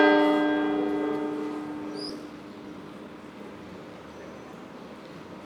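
An everyday sound recording with two faults. At 2.09 to 2.11 s there is a skip ahead: about 0.7 s of audio was dropped. The two sides join with no gap, so the sound jumps forward abruptly. From 2.19 to 3.15 s a jitter buffer speed-up follows. The receiver trims tiny pitch-period slices, removing around a tenth of a second. Playback runs about 11% fast at unchanged pitch and sounds hurried.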